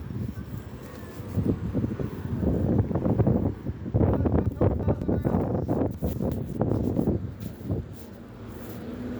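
A buffer of roughly 186 ms was written late, so chunks play out of order: from 4.46 to 5.02 s one lands two chunks late and from 5.94 to 6.32 s one lands a chunk late, each heard as a jumbled moment.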